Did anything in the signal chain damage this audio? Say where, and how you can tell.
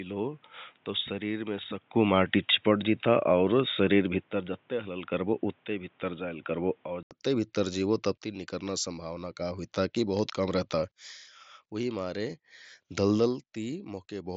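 Yes. Until 7.11 s the audio is boxy and ends at 3.8 kHz; then an 80 ms gap, a level jump of roughly 5 dB, and the band opens to the mSBC headset's 7.7 kHz. On a spectrogram the 3.8 kHz ceiling rises at the gap, and noise sits roughly 40 dB down. The likely cause is the input switched to a poorer device at the driver stage.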